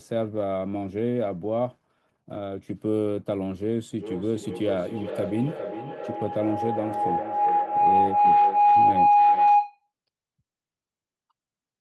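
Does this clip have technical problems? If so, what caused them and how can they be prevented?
Yes. A feedback howl runs from 3.98 to 9.91 s: a tone near 700 Hz swells to about 8 dB above the speech, pulsing roughly every 400 ms. Unlike an echo, whose repeats fade, these grow each trip around the microphone-to-loudspeaker loop. Muting one device or using headphones prevents it.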